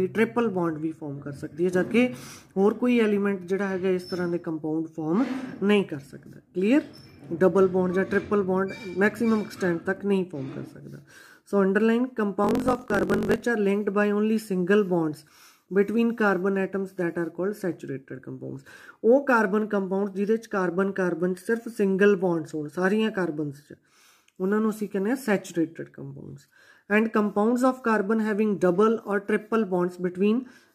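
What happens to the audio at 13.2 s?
At 13.2 s the sound sits inside a block size mismatch (truncated), running from 12.42 to 13.44 s. Each block is written longer than the next stage reads, which fits 1024-sample blocks, so its tail is discarded. A 45.9 Hz buzz appears, and the audio plays 1.07 times fast at roughly normal pitch.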